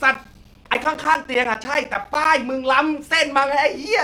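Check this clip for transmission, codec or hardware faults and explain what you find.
One hardware fault is present. From 0.14 to 2.25 s the speech ticks every 0.1 s. These are periodic USB or driver dropouts: a recurring stall of the bus or driver leaves gaps of silence of around 10 ms each.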